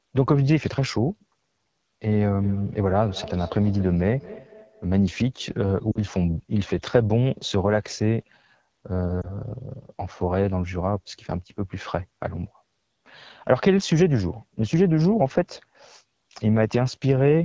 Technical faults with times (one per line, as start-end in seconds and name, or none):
0.00-17.45 AMR wideband (HD Voice) codec
2.42-4.92 feedback echo between two devices
5.91-5.99 lost AMR speech frames
9.22-9.32 lost AMR speech frames